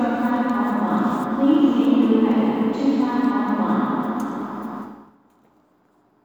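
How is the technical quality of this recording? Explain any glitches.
Nothing here stands out as a glitch, so there's really nothing to explain, and the recording comes across as technically sound throughout.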